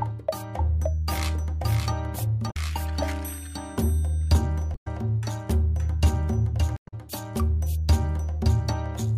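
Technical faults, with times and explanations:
Throughout, doubled audio track. A full-band copy trails about half a second behind, a few dB quieter, without decay. Likely a second, slower capture path.
2.47–2.56 s, 4.72–4.87 s and 6.74–6.94 s, damaged data in a compressed stream. Corrupt frames make the decoder lose sync, producing brief squawks or blips.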